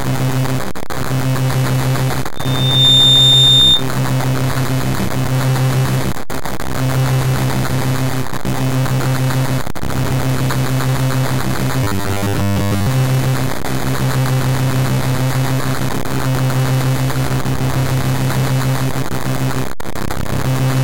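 From 2.35 to 3.85 s a loudspeaker feedback squeal appears: a single 3.6 kHz tone swells over about half a second until it sits about 5 dB above the audio. A microphone is picking up its own loudspeaker, and the loop gain at that frequency exceeds one.

From 11.84 to 12.87 s the sound turns robotic, a rigid metallic buzz at 100 Hz. This is likely from repeated short buffers: with new audio arriving too seldom, a roughly 10 ms segment is looped, and most of the real audio in that stretch is skipped.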